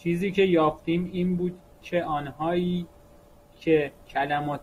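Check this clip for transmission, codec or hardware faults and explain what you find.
One transmission fault is present: an adaptive stream at a lower bitrate. From 0.97 s to the end of the clip, the speech quality drops abruptly with no gap. The adaptive stream switched to a lower-bitrate version when the connection slowed, and the change in sound fits a step from about 64 to 24 kbit/s Opus. After the switch, codec artefacts rise.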